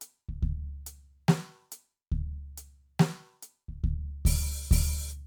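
Nothing in this music stood out as a technical fault on listening.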